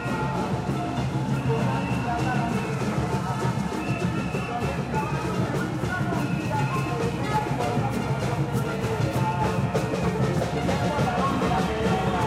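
No technical faults can be heard anywhere here.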